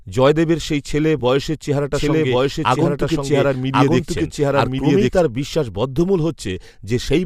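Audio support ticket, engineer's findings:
AAC frame loss with concealment, 1.19 to 1.22 s: about 20 ms of decoded audio missing, which fits two 10 ms low-delay frames dropped. Decoder patched the gap by reusing the last good spectrum with scrambled phase. Audible as a brief smeared, noisy blip rather than a click or dropout. Too short to reach the concealment fade, so level holds through it. The surrounding coding, likely low-delay AAC, shows only light damage.

Doubled audio track, 1.94 to 5.20 s: a second full-band copy of the speech mixed in roughly one second behind the original, at about the same level. Likely a second capture path or edit layering an out-of-step duplicate. Heard as overlapping, repeating speech with no reverb tail or room colour on the copy. It cuts in and out abruptly at both boundaries.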